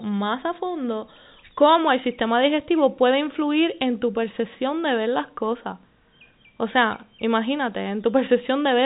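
No technical faults can be heard in this speech.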